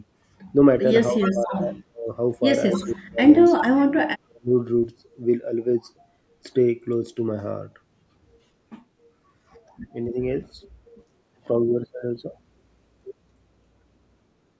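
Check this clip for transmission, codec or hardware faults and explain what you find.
Two call-path faults stand out, both clustered early.

Speech suppressed in double talk hits at 1.1–2.09, 2.73–3.51, 4.05–4.53 and briefly at 10.12–10.17 s. The speech dips hard, by roughly 30–40 dB at worst, but only slightly at 10.1 s. Likely an echo canceller ducking during overlapping talk.

Echo leak appears at 1.18–1.57, 2.73–2.88 and 3.45–3.65 s as a copy trailing 280 ms behind, about 10–20 dB down. Likely the far end's loudspeaker echo getting past its canceller.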